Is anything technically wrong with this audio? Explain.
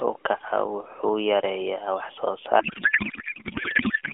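Yes. From 2.6 s to the end, a codec payload misread destroys the speech. The AMR frames appear packed octet-aligned but unpacked as bandwidth-efficient, so every field shifts. The decoder outputs garbled noise and warble that barely tracks the speech. The speech before this is carried over a narrowband AMR mobile link, limited to about 300 Hz to 3.4 kHz with light codec coloration, which fits a 12.2 kbps mode.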